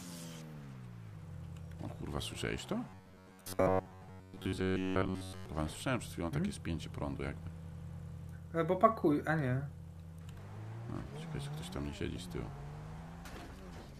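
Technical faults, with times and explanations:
2.89 to 5.46 s: robotic sound from repeated short buffers. The audio turns into a rigid, metallic buzz pitched at 93.8 Hz. That pitch matches a chunk about 10.7 ms long being played over and over. Most of this stretch, roughly seven tenths, is repeated material rather than new audio. The fixed repetition rate imposes its own pitch, so the sound only loosely tracks its original shape. The likely cause is new audio arriving too seldom, with the last short buffer replayed to fill the gaps.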